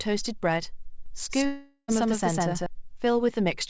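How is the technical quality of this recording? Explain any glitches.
The recording has two glitches in the middle of the speech. It also passes through a call codec that removes everything above 8 kHz.

Doubled audio track, 1.06 to 2.66 s: a second copy, about as loud, trails by roughly 150 ms, likely from a slower capture path, and starts and stops abruptly.

Long network dropout, 1.46 to 1.90 s: about 0.42 s of audio likely never arrived. A fading buzz or hiss covers the gap, then about 30 ms of silence, and the speech resumes without the lost part.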